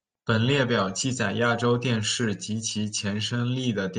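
No technical faults can be heard anywhere in the recording.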